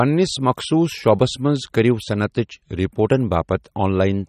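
From start to finish the speech carries plainly audible damage, likely from MP3 compression. Treble stops dead at 14.8 kHz, and faint detail flickers frame to frame, sounding watery. Unlike a plain low-pass filter, the loss keeps shifting, which fits roughly 32 kbps.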